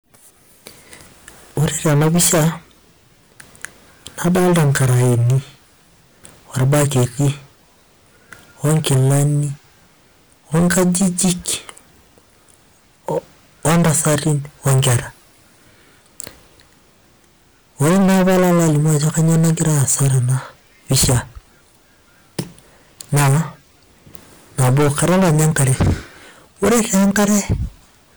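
From start to finish, a stage in the chain is overdriven by about 23 dB, so hard clipping cuts the waveform flat on roughly 15% of all samples. The squared-off peaks add high harmonics, turning every loud syllable into harsh, buzzing fuzz.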